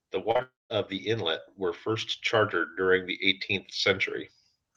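From 0.05 s to 3.5 s, automatic gain rising lifts the level by about 8 dB; background swells along with the speech, unlike a talker simply getting louder. At 0.31 s and 0.37 s, two back-to-back short concealed packet losses, about 40 ms and 20 ms missing, are patched with extended sound, giving brief smears rather than gaps. From 0.42 s to 0.72 s, the sound continues as a fading buzz or hiss and then goes silent for about 190 ms. This is likely a long network dropout, set apart from the short losses by that fade into silence before the audio resumes.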